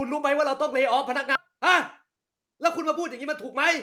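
At 1.35 to 1.37 s there's a skip ahead: roughly 0.7 s of speech got dropped while later audio was already queued, so playback jumps straight forward with no fill at all. The two sides butt together almost directly, and a chunk of talk just vanishes.

Then from 2.05 to 2.79 s you get a jitter buffer speed-up. The buffer was holding more than it wanted, so the receiver kept trimming tiny pitch-period slices, around 70 ms in all. The speech runs about 7% fast at the same pitch and feels a touch rushed.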